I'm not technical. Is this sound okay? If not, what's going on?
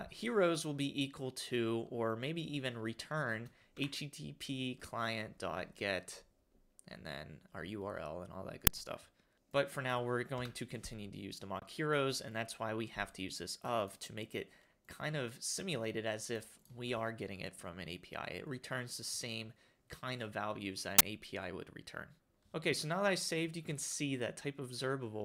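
No. There are two brief bursts of harsh digital noise, at 8.67 s and from 20.99 to 21.01 s, lasting about 5 ms and 20 ms. This is an uninitialised buffer fault: the playback system sent out a chunk of memory before any real audio had been written into it, so leftover junk data was played as if it were sound. That produces a sudden, loud crackle unrelated to the surrounding audio.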